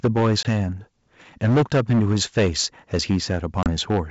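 A short stretch of speech carried over what sounds like a G.722 wideband call at 64 kbit/s. The coding itself is clean, and the problems come from the capture end and the network. The main one is microphone overload in three stretches. From 0.04 to 0.63 s the peaks go about 11 dB past the converter's limit, with roughly a tenth of the samples flattened. From 1.43 to 2.64 s it's worse, about 14 dB over with something like 15 percent clipped. From 2.93 to 4.0 s it's milder, about 6 dB over with only a few percent affected. In each case the tops of the waveform are sheared off, which gives the loudest syllables a harsh, crackly edge. That most likely comes from the input gain being set too high for the converter.

Right at 0.06 s, just after the first clipped peaks, there's a microphone volume step down of about 2 dB. Voice and background both drop together in one notch, likely the sort of single cut the call software makes when it decides the mic is running hot and pulls the device level back.

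There's also packet loss on the ADPCM call, heard as two hard-edged holes. The first is a 20 ms gap at 0.43 s, which fits a couple of lost packets. The second is a 30 ms gap at 3.63 s, about three packets' worth. Each time the audio comes back slightly distorted, because the decoder's predictor and step size have drifted away from the sender's. It settles again within a few tens of milliseconds.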